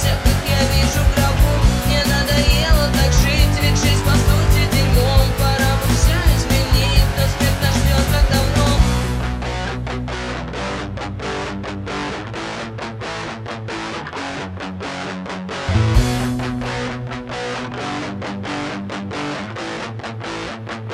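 Nothing stood out as a technical problem when listening to the audio.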